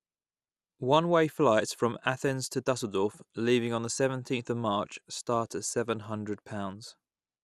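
Throughout, the speech sounds dull, gurgling and grainy. Upper bands flicker out under coarse quantising. The likely cause is MP2 compression, which fits a low bitrate near 80 kbps.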